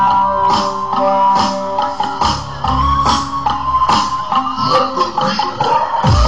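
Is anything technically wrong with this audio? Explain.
Yes. From 2.82 to 3.46 s the audio suddenly plays about 5.9% fast, raising pitch by roughly 99 cents, close to a semitone, then snaps back to normal speed. This is likely a drift correction step: software reconciling two clocks jumped the playback rate in one move to rebalance its buffer. Wow or flutter would make pitch waver gradually and repeatedly. This shift holds steady at one offset, with abrupt edges at both ends.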